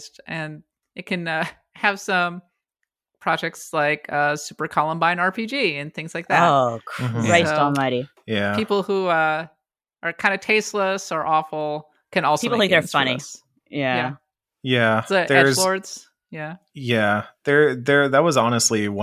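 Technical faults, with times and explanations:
No technical faults can be heard in this speech recording.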